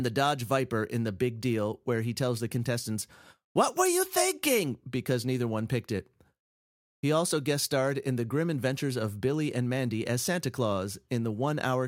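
No dropouts, distortion, noise bursts or timing faults turn up anywhere in this speech recording.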